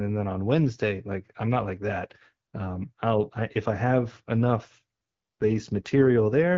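AMR rate drop from 4.82 s to the end: the codec steps down, fitting 12.65 to 8.85 kbit/s, so speech turns rougher and more synthetic, without any gap.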